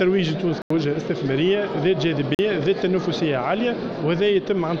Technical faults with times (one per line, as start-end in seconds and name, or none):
0.62-0.70 block of digital silence
2.35-2.39 block of digital silence